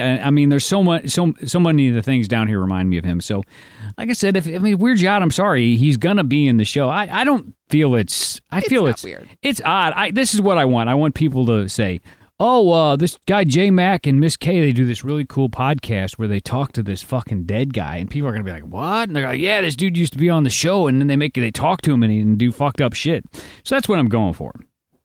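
No technical faults can be heard anywhere in the recording; the signal holds steady throughout, with nothing in the playback chain drawing attention to itself.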